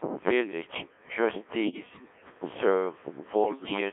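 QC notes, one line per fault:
Throughout, Codec 2 vocoder: the speech is carried by a very low-rate vocoder, around 1.3 kbit/s, that sends only pitch, voicing, energy and a spectral envelope per frame. The decoder rebuilds it from sine waves, so the voice sounds robotic and buzzy, band-limited to roughly 250 Hz to 3.5 kHz.
1.64 to 2.34 s and 3.44 to 3.80 s, bit errors on digital voice radio: flipped bits, a few percent of them, corrupt the frame parameters, so the synthetic voice lurches in pitch, level and tone colour, breaking into warbles, bleeps and garbled robotic sound across both stretches.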